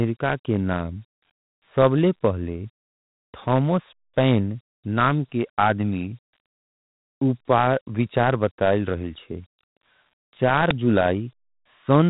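From the start, the speech carries Dialogic VOX ADPCM coding: each sample is squeezed into a 4-bit step relative to a running prediction, and the grit that clings to every syllable comes from that coarse adaptive stepping. Nothing reaches above 3.9 kHz, which fits an 8 kHz telephone-style rate at roughly 32 kbps. Unlike simple low-pass band limiting, the damage here is plainly audible as a rough hiss that rides along with the voice rather than sitting steady underneath it.

At 10.71 s an uninitialised buffer breaks through: a 5 ms block was sent to playback before any audio had been written into it, so whatever stale memory it held was played as samples. It lands as a sudden, very loud snap of digital noise. A dropout or a plain click would be silent or a single spike. This is a brief, loud blast of garbage, completely unrelated to the surrounding speech.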